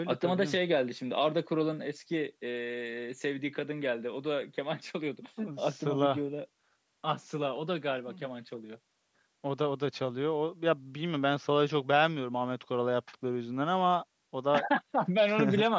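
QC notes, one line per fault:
No faults found in this speech clip. The call microphone processing is audible as a missing lowest bass and nothing above 8 kHz, which is normal for that path.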